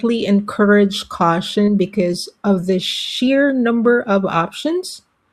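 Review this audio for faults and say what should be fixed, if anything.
At 1.65 to 1.69 s in this speech there is a short concealed packet loss. About 20 ms of audio arrived too late for the decoder. The receiver filled roughly that gap by extending the preceding sound, then crossfaded back into the real signal. The result is a brief smear across those few hundredths of a second. Prevention: give the network path more jitter-buffer headroom or add forward error correction, so late packets are covered.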